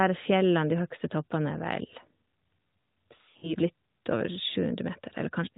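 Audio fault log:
3.22–3.55 s, lost AMR speech frames: scattered dropouts, longest 60 ms, as the decoder reuses the last good frame at falling gain, giving quick warbly dips.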